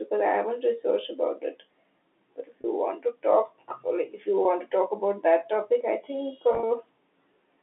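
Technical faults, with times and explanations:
2.61–2.64 s, 4.43–4.45 s and 6.53–6.63 s, packet loss with pitch repetition: brief held, buzzy stretches just before "want to talk or", between "or like if you" and "to talk about that", and after "that topic I think". Gaps of 30 ms and 20 ms, and 70 ms scattered over 100 ms in runs of up to 30 ms, are bridged by repeating the last pitch period of the telephone-band audio. That fits lost 10 ms packets.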